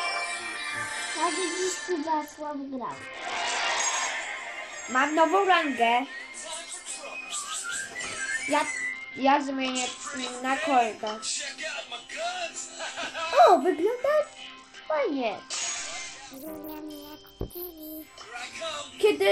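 A Bluetooth SBC bit pool drop, consistent with a fall from 31 to about 9 (roughly 72 kbps), dulls the treble and adds gritty noise at 1.84–3.80, 8.93–10.26 and 14.18–17.80 s.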